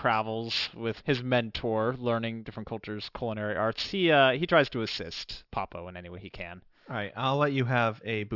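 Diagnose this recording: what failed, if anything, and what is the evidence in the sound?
Sibilants across the whole clip sound gritty and metallic, and the spectrum runs hard up to a ceiling at 6 kHz. That is aliasing at the sample-rate conversion stage. The audio was downsampled without an anti-alias filter, consistent with 48 kHz to 12 kHz, so content above 6 kHz folded back to wrong frequencies, sitting roughly 15 dB below the speech.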